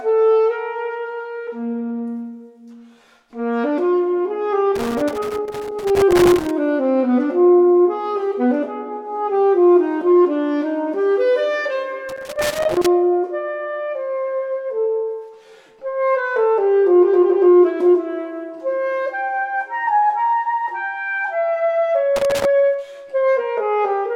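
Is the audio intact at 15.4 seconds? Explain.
Yes, the audio is intact at 15.4 seconds, with no dropout, click, distortion or other fault at that point.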